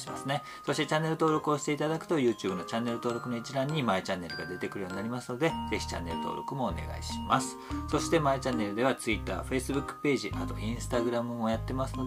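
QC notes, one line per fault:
No technical problems can be heard anywhere in the signal.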